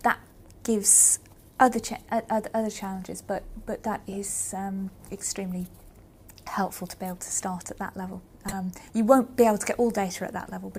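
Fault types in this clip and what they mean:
Corrupt frame decoded: damaged compressed frames got played anyway, so you hear four brief chirpy blips of misplaced energy scattered through the clip, the last one loudest.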